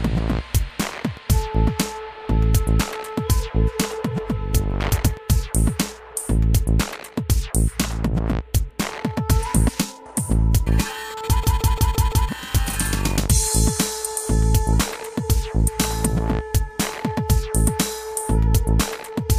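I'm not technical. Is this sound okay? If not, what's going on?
No. Around 11.44 to 12.29 s the computer briefly froze in a system hang loop, so a 0.17-second snippet repeats five times like a stutter, and about a second of audio is lost.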